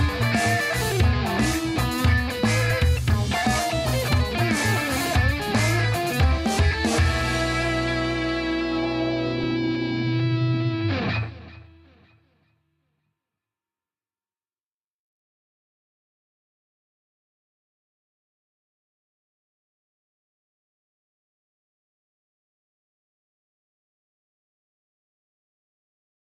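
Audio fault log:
2.70 s, 5.06 s, 9.43 s: compressed frames skipped. Each time about one 10 ms frame is lost, so the audio jumps ahead without a silent gap.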